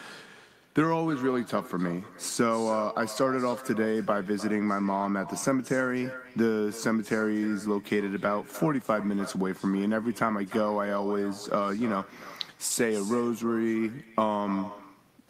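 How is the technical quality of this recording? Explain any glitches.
The technical quality is compromised throughout by echo with no canceller. For the whole clip, each stretch of speech is trailed roughly a third of a second later by a quieter, thinner copy at about 15 dB below the direct voice. The far end's loudspeaker output is picked up by its microphone and returned unremoved. On a waveform, faint delayed duplicates follow each burst. A spectrogram shows ghosted, weaker repeats of the speech patterns offset in time.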